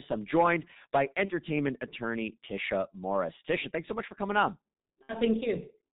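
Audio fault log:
Throughout: G.723.1 codec. The speech sounds muffled and hoarse, with smeared consonants and nothing audible above 4 kHz. The damage is heavy. The coder works in 30 ms frames at about 6.3 kbit/s, so it keeps only a coarse voice model. That model updates slowly, and fine spectral detail is thrown away. Sibilants and plosives lose their edges. The result is the thick, band-limited tone of early internet telephony.
1.25–1.32 s and 5.03–5.18 s: VoIP packet loss concealed by the speech codec. The first dropout comes right after "I'm joined by" and lasts about 30 ms, which fits one lost frame. The second comes after "much for coming on" and lasts about 60 ms, which fits two frames. In each gap the decoder repeats its last pitch and filter at falling gain. That gives a brief smear, and the voice stays weak for a moment after real audio resumes.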